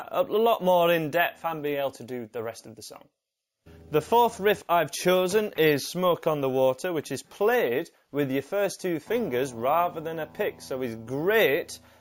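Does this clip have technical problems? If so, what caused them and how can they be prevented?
Yes. Imaging from sample-and-hold upsampling runs through the whole clip. A metallic fizz sits about 20 dB below the main sound, and its level rises and falls with it. The first mirror image fills the band from 8 kHz to 16 kHz, which fits 16 kHz audio raised to 48 kHz by repeating each sample with no smoothing filter. The spectrum folds around the old rate, so energy that was never in the original appears as a reversed copy above it, and that copy moves opposite to the sound's pitch. To prevent it, upsample with a proper interpolation filter that removes everything above the original 8 kHz limit.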